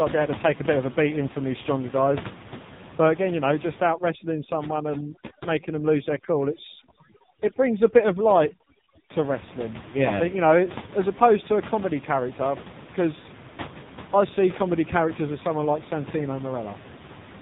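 AMR narrowband mobile codec damage runs through the whole clip. Nothing above 4 kHz survives, and the vocal-tract model, fed very few pulses per frame, leaves the speech buzzy and synthetic, which fits a low rate near 5.9 kbps. The room noise, about 14 dB below, swirls into a warble.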